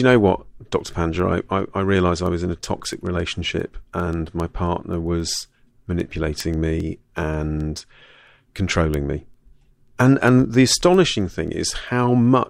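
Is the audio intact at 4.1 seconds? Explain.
No. Word clock ticks run from 0.13 s to 12.41 s, so 4.1 s is affected. A digital link read on an unlocked clock, which fits an error near 150 ppm, drops or repeats one sample about every 0.15 s. This produces sharp ticks of uneven strength, seen as evenly spaced thin vertical broadband lines on a spectrogram and single-sample discontinuities in the waveform.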